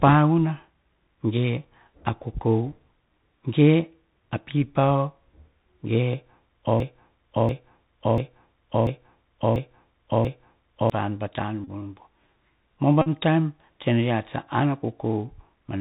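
From start to finish the speech passes through a Bluetooth CVSD headset codec, the narrowband one-bit-per-sample scheme that fits a 64 kbps link. The damage is plainly audible. Nothing above about 4 kHz survives, loud bright sounds outrun the adaptive step and break up, s sounds turn scratchy, and a granular hiss sits under everything. That steady hiss and slope-overload roughness mark it as CVSD rather than a simple low-pass or a modern wideband codec.

From 6.80 to 10.90 s a broken-record loop takes over. A fragment about 0.69 s long plays six times in a row, identical each time, and whatever speech belonged in those four seconds is simply missing. The likely cause is a player, encoder or stream stalling and resending the last chunk it held. The repeats are exact and back to back, with no fading or drift, so this is not an echo or a stutter effect.

Two Bluetooth headset packet repeated events follow, at 11.64 to 11.69 s and at 13.02 to 13.08 s. 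In each, lost voice packets were replaced by decoding the previous packet's bits again. The first lasts about 26 ms, which fits roughly seven packets, and the second about 45 ms, around twelve. Each sounds like a short buzz near 267 Hz from the 3.75 ms repetition. That steady pitch sets them apart from a click or a plain dropout.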